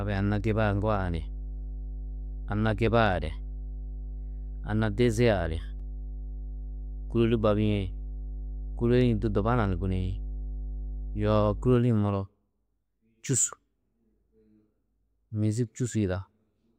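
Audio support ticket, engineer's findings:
Mains hum, 0.0 to 11.76 s: steady 50 Hz tone with low harmonics, fairly loud, roughly 10 dB under the speech. Points to a ground loop or nearby transformer coupling line frequency into the signal chain; stops at 11.76 s.

Block of digital silence, 5.80 s: 2 ms dropout heard as a sharp tick. Samples replaced by zeros, probably an output buffer not filled in time. Hard cut to silence and back, no fade.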